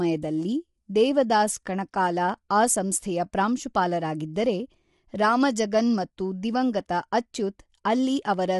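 Speech coded with what is likely low-delay AAC compression at a low rate, which fits a bitrate around 32 kbps, runs throughout: its short frames resolve the voice's harmonics poorly, leaving a plainly rough, grainy texture with noise between harmonics and nothing above 11.6 kHz.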